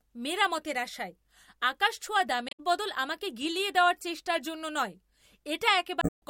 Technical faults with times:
2.46-2.60 damaged data in a compressed stream
5.99-6.22 damaged data in a compressed stream

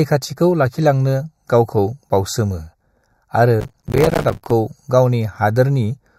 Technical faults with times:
0.00-6.18 channel delay (comb filtering)
2.09 gap between stream segments
3.60-4.51 processor overload crackle
4.10 gap between stream segments

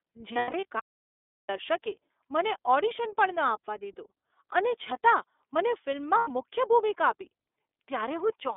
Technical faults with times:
0.00-8.57 iLBC codec
0.33-0.65 lost iLBC frames
0.80-1.49 audio dropout to silence
6.18-6.30 lost iLBC frames

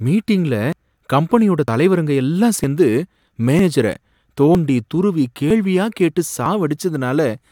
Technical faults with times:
0.72 audio missing between chunks
1.68 audio missing between chunks
2.64 audio missing between chunks
3.59 audio missing between chunks
4.55 audio missing between chunks
5.50 audio missing between chunks
6.46 audio missing between chunks

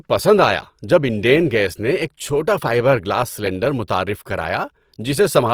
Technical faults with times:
0.00-5.53 Opus compression

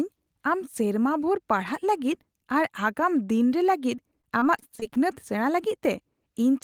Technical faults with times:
3.95-4.97 repeated packet loss (robotic sound)

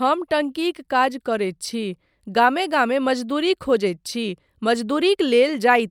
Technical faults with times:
none

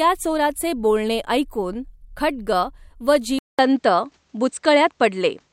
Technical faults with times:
3.39-5.52 input switched to a poorer device

